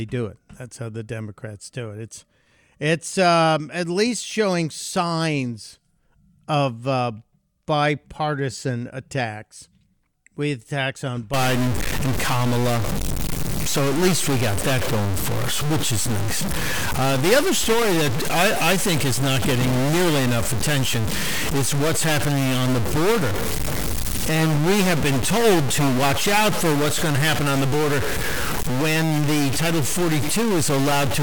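A stuck bit, likely from a faulty data line or converter, corrupts this speech recording from 11.34 s, just after "with attacks on", to the end. About half the samples jump by a fixed step of about -20 dBFS, producing harsh, buzzy distortion and noise that fills the pauses.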